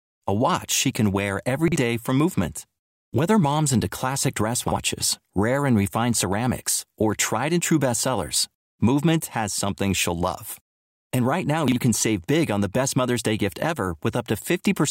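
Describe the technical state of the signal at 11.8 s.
A brief jumbled stutter in the speech ends just before 11.8 s, running from 11.68 to 11.76 s. It is a case of chunks out of order: one 40 ms block of audio turned up a single chunk late and played after the block that should have followed it. Nothing is missing, but the two segments are swapped, leaving three hard joins around the scrambled moment.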